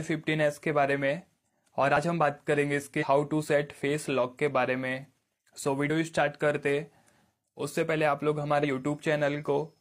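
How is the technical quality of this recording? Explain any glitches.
Three brief compressed frames skipped glitches at 2.98–3.04 s, 5.86–5.90 s and 8.60–8.65 s. The decoder drops whole frames (about 46.4 ms each), so the audio jumps ahead about 150 ms at the first and about 50 ms at the others.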